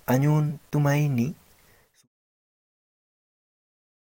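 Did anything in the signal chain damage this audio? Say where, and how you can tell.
Yes. At 0.49 s the speech is interrupted by a brief glitch, the sign of damaged data in a compressed stream at the codec or storage stage. Corrupted bytes made the decoder misread a frame, lose sync and resume at the next valid header, so the audio breaks up there. A converter or wiring fault would give a plain click or gap with no tonal artefact or skip. The fade-out from around 1.5 s to 2.08 s is a smooth edit, not damage.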